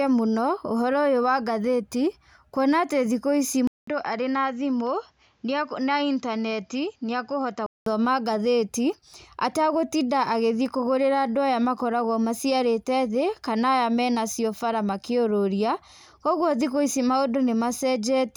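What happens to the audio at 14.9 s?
Nothing goes wrong at 14.9 s; the speech there is intact, with no dropout, click, distortion or other fault.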